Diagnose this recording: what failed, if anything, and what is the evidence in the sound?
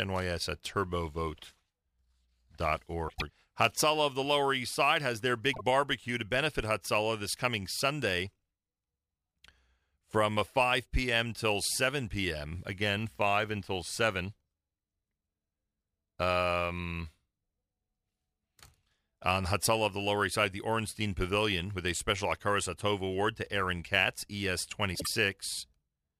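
The converter stage shows sample clock jitter throughout the speech. A hiss and roughness rides on the louder, brighter sounds and vanishes in pauses. An unsteady clock of a few microseconds mistimes each sample, leaving error roughly 30 dB below the signal.

Frames out of order point to the codec or network stage. At 3.08 to 3.30 s, 5.53 to 5.61 s and 24.94 to 25.07 s, a garbled flutter is heard. Adjacent blocks of 104.5, 26.1 and 52.2 ms play swapped, which fits runs of roughly 26 ms frames. No time is lost.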